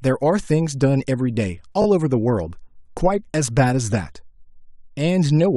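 Speech with a repeated buffer at 1.82 to 1.86 s: the same 20 ms slice plays twice more with hard joins, giving a brief buzzy stutter. Unlike a dropout, nothing falls silent and little or no audio goes missing; the device replayed stale audio when new data arrived late.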